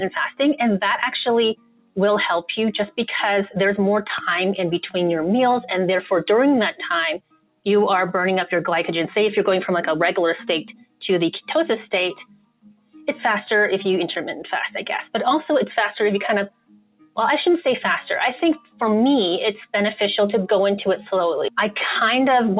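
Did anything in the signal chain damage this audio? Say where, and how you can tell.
Yes. The damage happens at the call-processing stage: a noise suppressor meant for speech was left on for non-speech sound throughout the clip. Steady tones and decaying tails are treated as noise and pulled down, while sharp onsets mostly pass, so the level pumps by around 10 dB across the whole 23 seconds. This runs through a call path band-limited to 4 kHz, which fits G.711 A-law.

Sound cut by the noise suppressor is heard at 1.54–1.98 s, 7.18–7.66 s, 10.71–11.01 s, 12.22–13.08 s, 16.49–17.17 s and 18.56–18.80 s. The drops reach about 22 dB in most places, about 21 dB at 10.71 s and about 19 dB at 18.56 s. In each stretch the suppressor judged the sustained or fading material to be noise and pulled it down, leaving dips of roughly 0.2 to 1 s.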